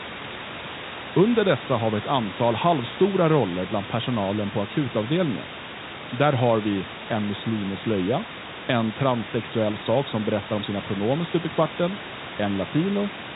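Nothing in this speech recording stood out as a technical problem on listening.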